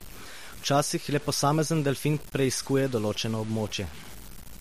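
Throughout the speech, a grainy distortion tracks the signal, most likely from low bit depth without dither, with samples truncated to about 6 bits. The error sits roughly 20 dB below the speech, so quiet passages turn gritty. The waveform shows visible stair-steps, and the spectrogram shows broadband hash that rises and falls with the voice.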